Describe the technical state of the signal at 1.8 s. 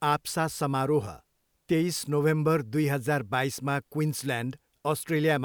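At 1.8 s the speech signal is intact, with no audible fault at that moment.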